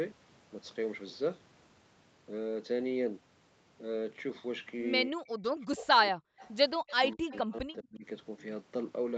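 Speech suppressed in double talk runs from 5.07 to 6.43 s. The speech dips sharply, by about 40 dB at its deepest, and drops out in pieces for about a second in total. The likely cause is an echo canceller that could not tell the local talker from loudspeaker echo while both sides spoke, so it turned everything down at once.

An echo leak follows at 6.39 to 6.52 s and again at 6.87 to 7.39 s. A faint delayed copy of the speech trails the original by 201 ms. It is about 30 dB below the speech in the first burst and about 25 dB below in the second. This is likely sound from a far-end loudspeaker that the echo canceller there failed to remove fully and sent back down the call.

Speech suppressed in double talk returns from 6.9 to 8.05 s, overlapping the second leak. The speech again falls away by up to about 40 dB, fragmented over roughly 0.7 s in total, likely as the canceller clamps down during simultaneous talk.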